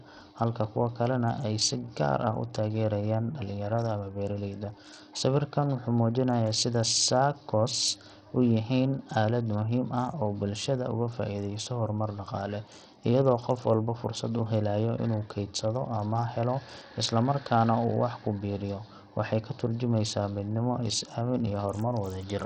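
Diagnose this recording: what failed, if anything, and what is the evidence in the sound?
Codec stage, throughout: gritty, flickering treble on the speech and nothing above 16 kHz, likely Bluetooth SBC compression starving its top sub-bands. A spectrogram shows blinking upper bands.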